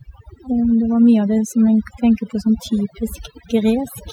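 A speech recording with overdone noise removal across its whole length. A noise reduction process was set far too aggressively. Wherever a frequency band sat close to its noise estimate, it was pulled right down or cut out. The background between phrases drops and breaks up into twinkling specks. The quieter parts of the voice were caught as well.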